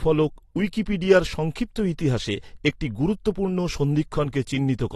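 Speech, and the whole thing has the dull, smeared quality of AAC compression, with the damage plainly audible from start to finish. There's nothing above about 12.4 kHz, so the top end just stops, and the sibilants and sustained sounds get that fizzy, warbly texture. That's likely AAC-LC at a low bitrate, and the cut-off and smearing fit something around 32 kbps, where the encoder drops the highs and coarsely quantises what's left.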